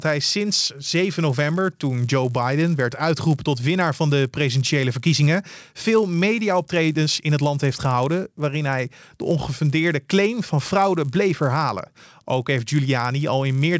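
It's a speech clip with a resampler restarted on every block running the whole way through: each 10 ms chunk gets converted in isolation, so every edge carries a small error, giving a 100 Hz buzz that rides only on the sound. It fits a 44.1 kHz to 16 kHz conversion.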